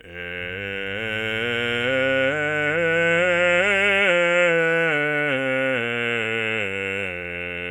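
From 0.38 s to 4.04 s the music carries mains hum, a steady 50 Hz tone sitting well below the music, leaked in through a ground loop or nearby transformer. Unlike broadband rumble, it holds one fixed pitch that never drifts with the music.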